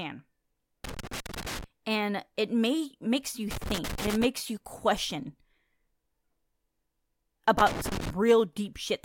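Loose connector crackle breaks into the speech at 0.84 to 1.64 s, again at 3.51 to 4.25 s between "it may makes you" and "you question", and finally at 7.59 to 8.10 s. Each time, a worn or dirty contact in the signal path is rapidly losing and regaining connection, chopping the audio into fragments. The result is an irregular, scratchy burst lasting roughly half a second to most of a second.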